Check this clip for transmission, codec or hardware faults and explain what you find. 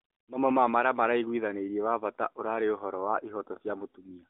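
The speech passes through an AMR narrowband mobile codec working as designed, with its band stopping at 4 kHz and only the light coloration that fits the codec's top 12.2 kbps mode, and nothing wrong stands out.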